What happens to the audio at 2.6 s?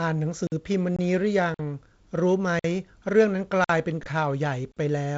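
The speech drops out for a short, hard-edged hole of about 50 ms, from 2.59 to 2.64 s. This is a gap between chunks: the audio was delivered in pieces and silence was left at a join, so nothing is lost, only interrupted.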